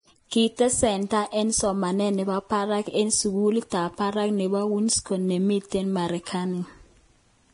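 Speech throughout, carrying heavy lossy-codec damage across the whole clip, most likely Vorbis compression at low quality. Nothing is present above about 10.6 kHz, and the treble below that line has turned grainy and hissy. The encoder has evidently quantised the residue above its spectral floor so coarsely that fine high-frequency detail is replaced by noise of similar energy. Tones sound roughened and consonant attacks are smeared, which fits a bitrate around 30 kbps.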